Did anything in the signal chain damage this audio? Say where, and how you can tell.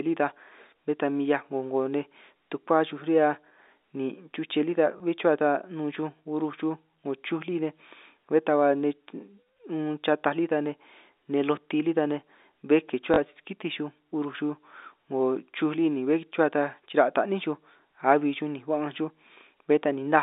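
Yes. Packet loss with the last packet repeated, at the network stage: a small blip at 4.98 to 5.00 s and a short robotic stutter at 13.14 to 13.18 s. The receiver refilled each gap with the previous 20 ms, fitting one lost packet, then two. The 40 ms run buzzes at 50 Hz.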